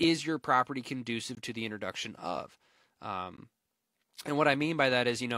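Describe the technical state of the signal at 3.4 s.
A gap between stream segments occurs at 3.37 s. Two consecutive segments are timestamped about 17 ms apart rather than butting together, and the player fills that space with silence. In this speech, the result is a brief hard-edged dropout with nothing lost, only delayed.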